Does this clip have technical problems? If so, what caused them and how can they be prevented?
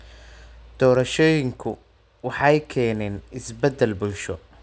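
Yes. A resampler restarted on every block converted 24 kHz to 16 kHz in 50 ms pieces, so throughout the speech a 20 Hz ticking buzz follows each block edge. Prevent it by keeping the resampler's filter state running across blocks.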